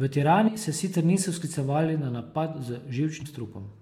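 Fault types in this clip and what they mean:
Compressed frames skipped: whole frames of the encoded stream never reached the output, either missing from the file or thrown out by the decoder as damaged, so playback leaps forward by a handful of frames, roughly a tenth of a second of speech each time. This happens once at 0.47 to 0.49 s just before "se sicer" and again at 3.21 s.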